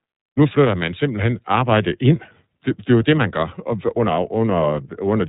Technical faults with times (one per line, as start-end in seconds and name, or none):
0.00-5.29 iLBC codec